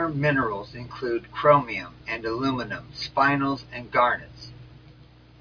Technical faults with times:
none

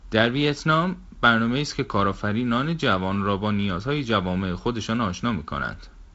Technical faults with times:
none

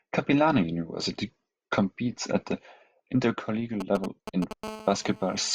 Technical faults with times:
3.80-4.53 GSM signalling bursts
4.63-5.50 GSM phone buzz

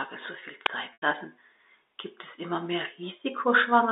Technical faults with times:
0.66 uninitialised buffer
0.93-1.02 packet loss with pitch repetition

